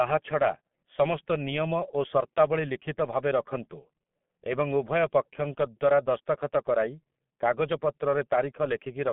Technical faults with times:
0.00-9.12 G.723.1 codec

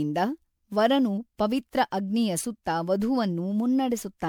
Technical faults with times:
0.00-4.29 generation loss

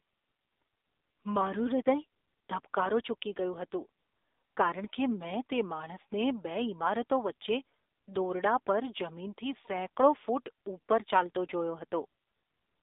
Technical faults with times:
0.00-12.82 AMR narrowband mobile codec

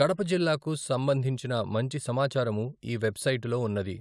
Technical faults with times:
none

